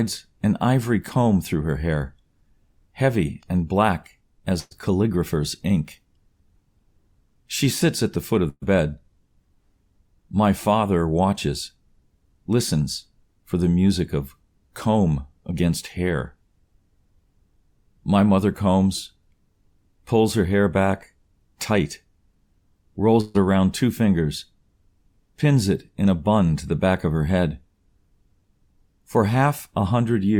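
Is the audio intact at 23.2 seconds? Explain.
No. A burst of packet loss begins at 23.21 s and runs to 23.36 s, roughly 140 ms. Several consecutive packets failed to arrive in time, so the receiver stretched the last sound it had and let it fade rather than falling silent, and no gap of silence is heard. That concealment covers the whole span, after which the audio picks up further along. The missing 140 ms is simply skipped, replaced by a decaying buzz or hiss.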